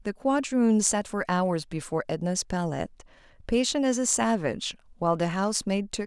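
Speech, with no technical faults.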